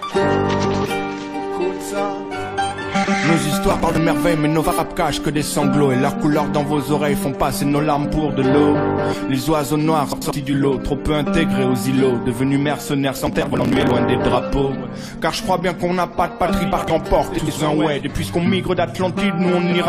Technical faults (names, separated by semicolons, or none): frames out of order; processor overload crackle